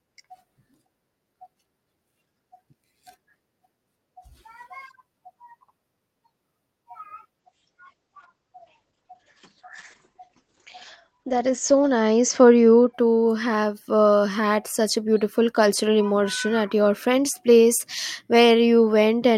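From 7.41 to 12.99 s there's a call bitrate drop: the audio goes rough and muffled, top end shrinking from 20 kHz to 8 kHz, consistent with 64 falling to 12 kbps, clearing before "have uh had such".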